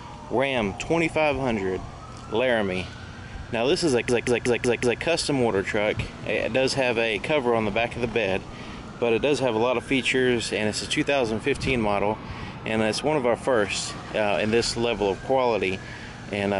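From 4.09 s to 5.02 s there's a system hang loop. The machine or its driver froze while the audio hardware kept replaying the same ring buffer, so one chunk of about 186 ms repeats exactly five times, a stutter at about 5.4 per second. That loop length fits an 8192-sample buffer. Once it recovers, the sound picks up again with essentially nothing dropped.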